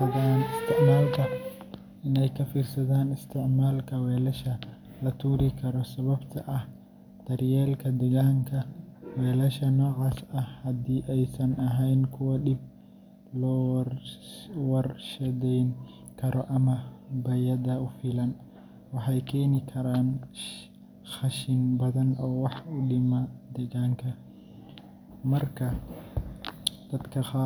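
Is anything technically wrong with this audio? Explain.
No, nothing technically wrong can be heard in this speech recording. No dropouts, distortion or other technical faults turn up anywhere in it.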